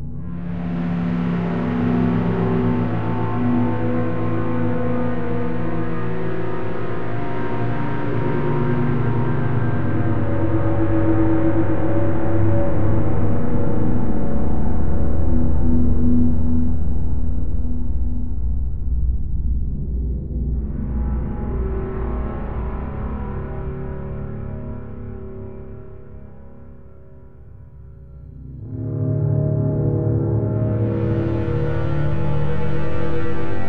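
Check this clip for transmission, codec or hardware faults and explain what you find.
Nothing attributable to the transmission path, the codec or the hardware shows up anywhere in the audio.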